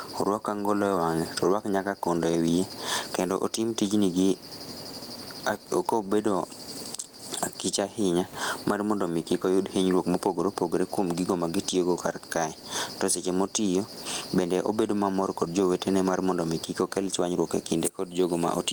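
Throughout the speech, gain pumping: the room noise sits about 37 dB below the speech, and the level is pulled down on each loud syllable, likely from excessive gain with a fast limiter swinging level by around 15 dB.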